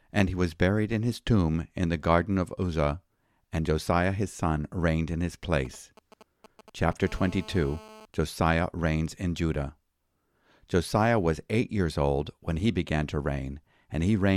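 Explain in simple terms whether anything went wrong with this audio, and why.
Yes, two things went wrong, both caused by a mobile phone sitting near the recording gear.

The first is GSM signalling bursts, from 5.65 to 6.93 seconds, just after "son reigned in his". An older 2G phone sent short groups of radio pulses while it was signalling. The audio circuit picked them up and turned them into sound. You hear a galloping dit-dit-dit of brief buzzes, pulsing about 217 times a second, fairly quiet under the speech.

The second is GSM phone buzz, from 7.03 to 8.05 seconds. Here the phone was in a call, so it sent pulses continuously, 217 times a second. The circuit turned these into a steady, harsh, raspy buzz with a rough, gritty edge. It has nothing to do with the speech. It sits at a similar quiet level, but it holds steady instead of galloping.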